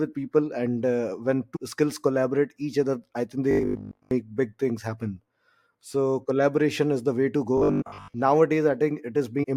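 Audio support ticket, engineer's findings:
Compressed frames skipped: decoder dropping whole frames, from missing or rejected data, and jumping ahead. Sound lurches forward. At 1.55–1.57 s, roughly 400 ms of speech gone, which fits around 15 frames. At 7.81–7.83 s, roughly 200 ms lost, around 10 frames. At 9.42–9.44 s, roughly 300 ms lost, around 15 frames.

Robotic sound from repeated short buffers: new audio arriving too seldom, likely a starved playback buffer with the last 20 ms looped to fill gaps. Most of the real audio is skipped. Speech turns into a rigid metallic buzz locked at 50 Hz, loosely tracking the words. Heard at 3.51–4.11 s and 7.57–8.16 s. The second overlaps the frame skip at 7.81 s.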